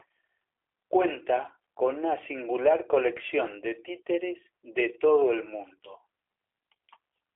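From start to finish, the speech carries G.729 codec damage, and it is plainly audible. Nothing passes above about 3.7 kHz, and the line band sits near 300 Hz to 3.5 kHz. The codec rebuilds each short frame from a filter model and a few pulses, not the real waveform. The result sounds rough and slightly synthetic. The thin, buzzy texture fits a low 8 kbit/s rate.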